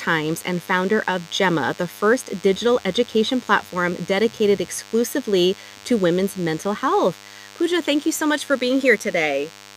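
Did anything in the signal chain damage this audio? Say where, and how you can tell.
Yes, in the analogue wiring: a DECT cordless phone buzz runs under the speech for the whole clip, a thin 100 Hz buzz rich in harmonics, sitting roughly 25 dB below the speech. A nearby handset or base transmits a burst every 10 ms, and the analogue circuitry rectifies it into audio.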